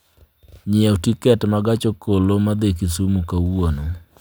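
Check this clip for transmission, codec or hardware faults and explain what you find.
Nothing turned up worth flagging here; the speech comes through without any fault to report.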